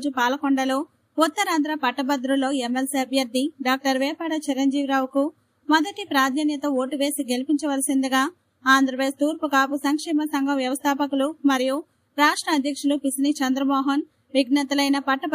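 No faults detected; nothing to flag.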